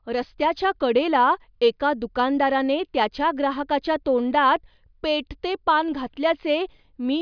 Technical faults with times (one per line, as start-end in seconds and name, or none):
none